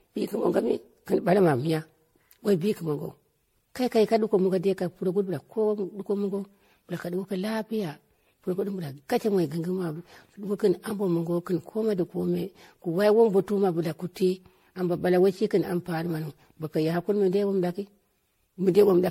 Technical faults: generation loss

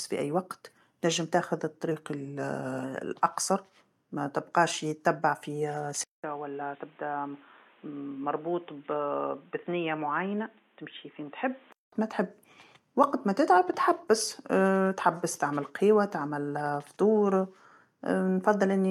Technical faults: drift correction step; input switched to a poorer device

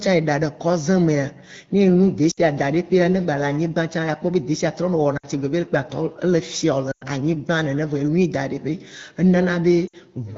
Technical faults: lost AMR speech frames

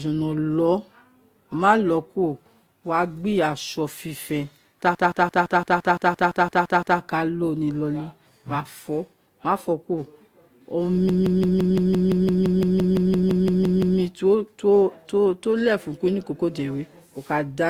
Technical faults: transcoding between lossy codecs; system hang loop

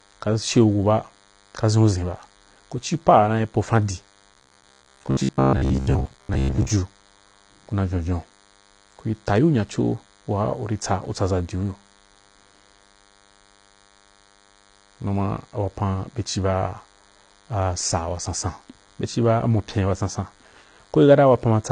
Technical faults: DECT cordless phone buzz; AAC compression; robotic sound from repeated short buffers

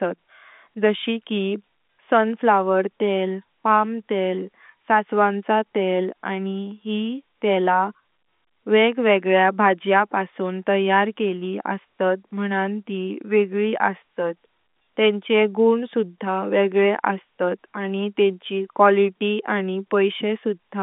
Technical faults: none

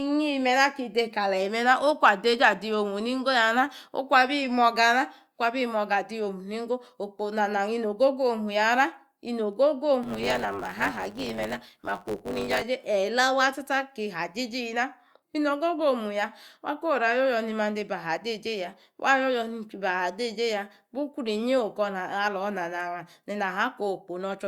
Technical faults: block size mismatch (truncated)

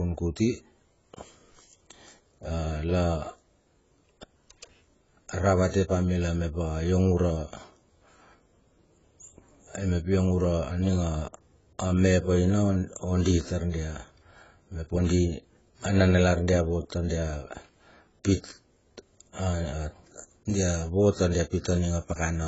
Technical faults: AAC compression

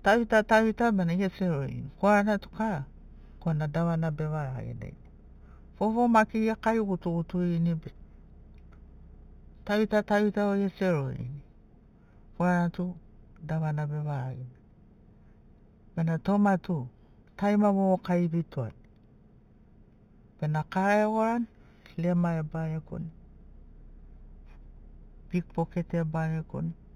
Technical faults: imaging from linear upsampling

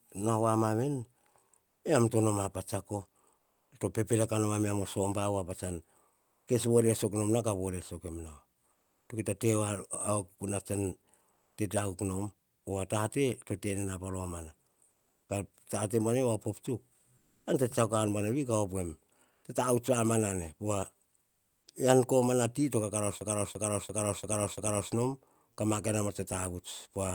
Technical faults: comfort noise in place of the background; system hang loop

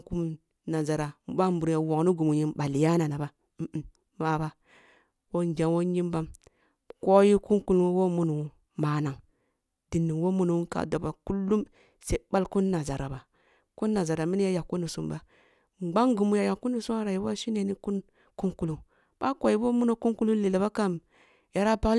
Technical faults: none

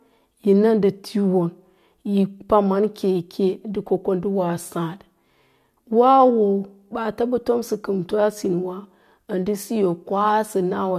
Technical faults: none

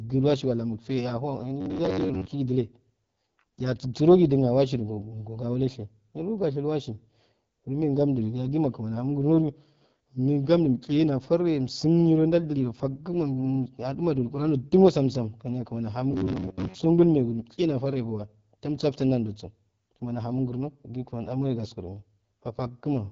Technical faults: AMR wideband (HD Voice) codec; robotic sound from repeated short buffers

